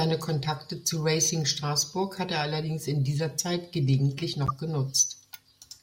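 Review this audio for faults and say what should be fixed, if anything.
Three corrupt frames decoded in this speech: a faint blip at 0.91 s, about -35 dBFS, and a louder burst from 4.47 to 4.50 s, about -15 dBFS, likely spanning a couple of frames. Damaged bitstream data was decoded as-is, placing energy at wrong frequencies. Prevention: add checksums so the decoder conceals bad frames.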